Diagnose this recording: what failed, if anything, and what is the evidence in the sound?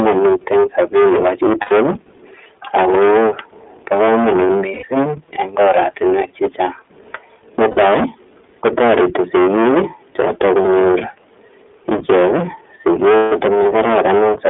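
Every loud syllable carries a harsh, gritty fuzz, with peaks squared off across nearly a third of the audio. This is hard clipping, with the signal driven about 23 dB past full scale at a gain, converter or sample-format stage, so the waveform tops are cut flat.

The sound is thin and boxed-in, passing only about 250 Hz to 3.5 kHz, with a rough, slightly synthetic texture. That points to the iLBC codec in the call path, consistent with its 13.33 kbps mode and 30 ms frames, where the excitation coding audibly degrades the speech.

Brief held, buzzy vowel-like smears replace the speech at 1.61 s (90 ms), 4.73 s (90 ms), 7.71 s (60 ms), 10.62 s (30 ms) and 13.16 s (150 ms). These are lost iLBC frames on the network, filled in by the decoder's concealment, and normal speech returns immediately after each one.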